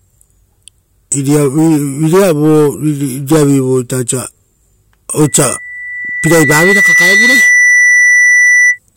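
Loudspeaker feedback squeal takes over this speech clip from 5.24 s to 8.79 s: a microphone is hearing the loudspeaker it drives, and the loop gain passes unity at 2 kHz, so that tone swells over roughly a second and a half to sit a few decibels above the speech.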